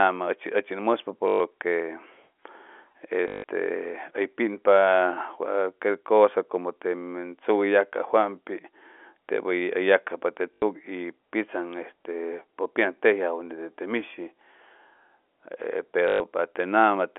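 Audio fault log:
1.28–1.40 s, 3.28–3.44 s, 10.54–10.62 s, 16.08–16.20 s: packet loss with last packet repeated. The 120, 160, 80 and 120 ms gaps repeat one chunk, giving a robotic buzz near 50 Hz, consistent with 20 ms packets, over telephone-band audio.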